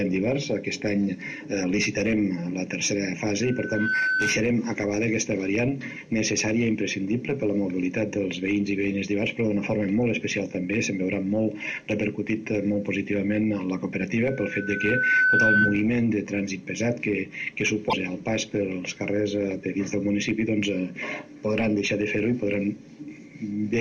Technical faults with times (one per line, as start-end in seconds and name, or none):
3.42-4.45 loudspeaker feedback squeal
14.25-15.84 loudspeaker feedback squeal
17.89-17.93 broken MP3 bit reservoir